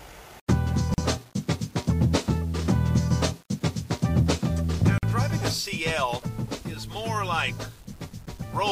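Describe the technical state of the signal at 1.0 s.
At 1.0 s the signal has just come out of a gap at a join of encoded pieces, a dropout running from 0.94 to 0.98 s, about 41 ms long, and recurring every 4.0 s. Two separately encoded segments were butted together without trimming, so the encoder's start-up delay and the padded final frame both remain as silence. The sound cuts off, goes silent for part of that span, then resumes where it left off, with edges smeared by the codec.

The audio is also affected by low bit depth without dither. It carries a grainy, signal-following distortion roughly 30 dB below the program level, which fits an 8-bit signal that was likely rounded to those few steps with no dither applied. Because the error tracks the waveform, quieter passages sound rough and buzzy, and the lowest-level material either collapses to silence or sputters between adjacent quantization steps.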